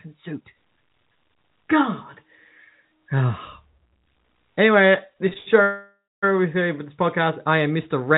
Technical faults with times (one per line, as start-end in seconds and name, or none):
5.26-5.48 repeated stalls (stutter)
5.62-6.24 call audio freeze